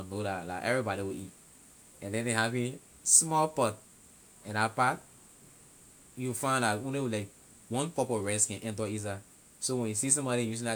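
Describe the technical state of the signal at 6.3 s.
At 6.3 s the speech signal is intact, with no audible fault of any kind at that moment.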